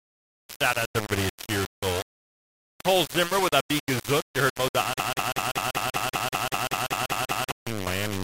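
Throughout the recording, the speech was likely reduced to a very coarse bit depth, consistent with about 4 bits, and rounded with no dither. The rounding error tracks the signal, so every syllable carries a grainy, shifting distortion only about 10 dB below the speech, and quiet passages sputter.

From 5.00 s to 7.51 s, the playback or stream likely stalled and kept resending its last held fragment, producing a broken-record loop. A 193 ms snippet repeats back to back, 13 times in a row, and the speech that belonged in those two and a half seconds is missing.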